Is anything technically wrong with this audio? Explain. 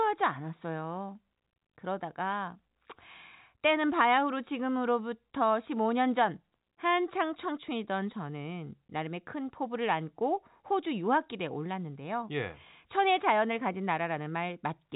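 No, nothing technically wrong is audible here.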